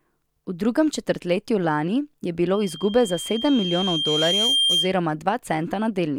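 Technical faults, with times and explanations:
2.53 to 5.01 s, loudspeaker feedback squeal: a 3.2 kHz tone swells over roughly two seconds to about 5 dB above the speech as the microphone–speaker loop gain exceeds unity.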